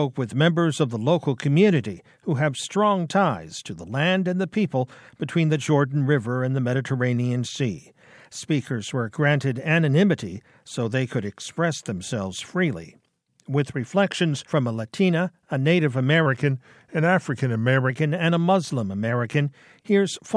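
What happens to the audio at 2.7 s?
Nothing goes wrong at 2.7 s; the audio carries on intact through that moment with no dropout, click or other disturbance.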